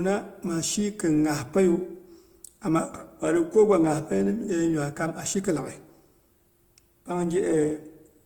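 Opus compression, likely the cause, runs through the whole speech clip. The encoder stays in its music-oriented CELT mode with full bandwidth, so content reaches up to about 20.1 kHz. Because the bit budget cannot describe each band in detail, the codec keeps every band's energy and fills the shortfall with folded or noise-like content. The damage is plainly audible: tonal parts of the sound turn grainy and rough, which fits a low bitrate around 24 kbps.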